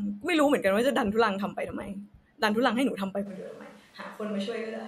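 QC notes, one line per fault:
3.28 s to end: switch to a distant microphone. Speech turns suddenly roomy and hollow, thinner in the bass, about 5 dB quieter and noisier, likely from losing the close microphone. The waveform steps down, and the spectrogram thins at the bottom with a raised noise floor between syllables.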